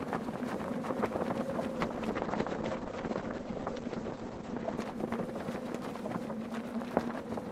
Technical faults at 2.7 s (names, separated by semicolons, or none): call bitrate drop